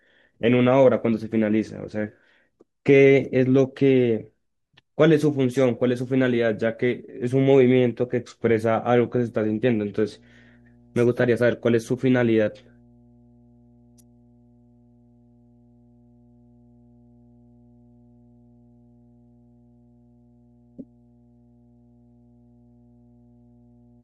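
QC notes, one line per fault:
9.14 s to the end: mains hum. A steady low tone at 60 Hz comes in and stays under the speech until the clip stops. It sits about 35 dB below the signal. A ground loop or nearby transformer is feeding the power line into the audio.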